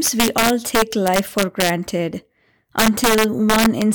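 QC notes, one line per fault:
throughout: integer overflow. The speech is driven about 4 dB past full scale, and around one percent of samples wrap to the opposite sign instead of being limited, giving violent cracks on loud peaks. The waveform shows full-range vertical jumps; the spectrogram shows thin broadband streaks.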